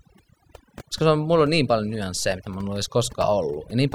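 From start to finish the speech carries overdone noise removal. A noise reduction stage was pushed too hard on a noisy source, so individual frequency bands that sit close to its noise estimate get pulled far down or gated out entirely, taking the quieter components of the voice along with the noise. Between phrases the background collapses to near silence sprinkled with twinkling specks.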